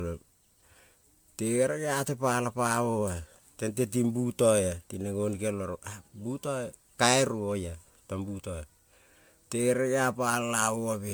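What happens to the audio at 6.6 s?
At 6.6 s the speech has the swirly, smeared, hollow quality of generation loss. It is present across the whole clip, not just at that moment. The character is likely caused by repeated lossy re-encoding, with the sound pointing to about seven passes through an MP3 coder at a rate consistent with 128 kbit/s. Each pass requantises on a shifted frame grid, so noise and spectral gaps accumulate. Consonant attacks blur. Content still reaches about 20.1 kHz.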